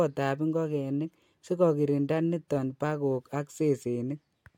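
No technical faults can be heard in this speech recording. The signal stays continuous and steady throughout, with no event to place on the timeline.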